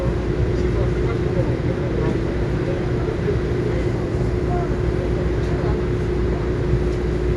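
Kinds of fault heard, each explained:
Dolby Digital compression: The audio is dull throughout, with nothing above 11.4 kHz, and the coding damage is plainly audible as a rough, fluttering grain around tonal parts. The likely cause is Dolby Digital coding at a low rate, which fits about 64 kbps. At such a rate the encoder narrows the band. It also leaves many frequency lines without detail, and the decoder fills those gaps with noise.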